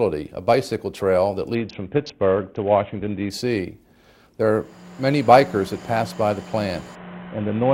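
The audio suffers two Bluetooth SBC bit pool drops, from 1.55 to 3.30 s and from 6.95 s to the end. In both, the treble turns dull and a gritty grain rises. The sound fits an SBC bit pool falling from 28 to 5, about 54 kbps.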